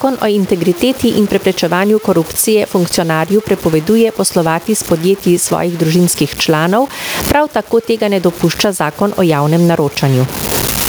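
Throughout the speech, the samples have likely been cut down to very few levels by truncation with no dither. That leaves an error that tracks the speech itself, sitting only around 20 dB below it, which fits a 6-bit word length. The result is a grainy, gritty distortion that changes with every syllable. Quiet word endings and soft consonants break up, sputtering between adjacent steps or dropping abruptly to silence instead of fading.

Also present for the whole clip is gain pumping. The input gain is likely far too high for the microphone, with a fast limiter or compressor pulling the level down on each loud sound. The gain swings by roughly 20 dB. Loud and soft parts are pressed close together, so the speech sounds flattened and squashed.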